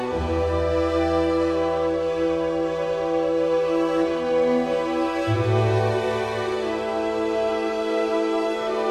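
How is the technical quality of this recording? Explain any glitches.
No glitches or faults are audible.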